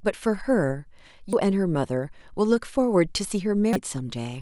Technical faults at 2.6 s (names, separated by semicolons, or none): none